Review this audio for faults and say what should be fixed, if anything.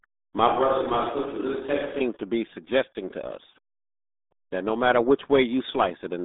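The whole clip sounds muffled, boxed-in and gargly, with no brightness at all. Nothing above about 3.8 kHz survives, and the usable band runs from roughly 250 Hz to 3.7 kHz. The heavy smearing of consonants fits the RealAudio 14.4 codec, an 8 kbit/s dial-up-era speech coder that throws away the upper spectrum and crudely models what remains. To prevent it, capture and deliver the speech through a modern wideband codec at a sensible bitrate.

From 0.48 to 2.01 s, just before "to be suggesting to", the voice turns suddenly hollow and roomy. It loses body in the low end, drops by a few decibels, and carries noticeably more background noise. The sound then snaps back to its closer character. The likely cause is a switch to a distant microphone: the close mic's signal dropped out and a farther pickup, such as a camera mic, filled the gap. To prevent it, secure and monitor the close microphone's connection so its feed never drops.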